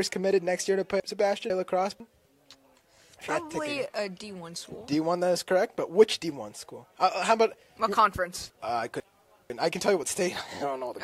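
Two spots of chunks out of order, 1.0 to 2.0 s and 8.5 to 9.5 s: a half-second chunk plays one slot late, so the sound jumbles.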